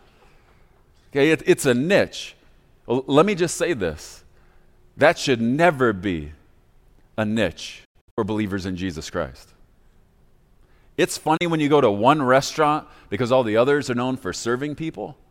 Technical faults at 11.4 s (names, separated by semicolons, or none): digital broadcast dropout